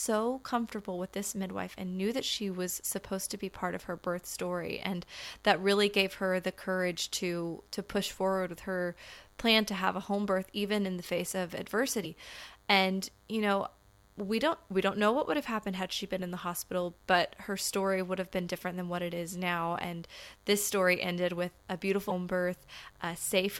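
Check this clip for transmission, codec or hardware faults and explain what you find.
Two faults are present: a constant buzz under the speech and two brief glitches where the audio skips.

Throughout the clip, a thin, steady buzz sits about 35 dB below the speech. It is a 100 Hz tone rich in harmonics. This is DECT cordless phone buzz. A DECT handset or base station nearby transmits a short radio burst every 10 ms, and the audio circuitry rectifies those bursts. The result is a buzz locked to that 100 Hz repetition rate.

At 12.03 to 12.06 s and again at 22.09 to 22.12 s, the speech glitches for roughly 30 ms and jumps ahead. Each disturbance lasts about one 26.1 ms MP3 frame. The likely cause is a broken MP3 bit reservoir. Frames had been dropped from the stream. The frame after each gap then reached back into the reservoir for data it had borrowed and found bytes from a different frame, so it decoded incorrectly.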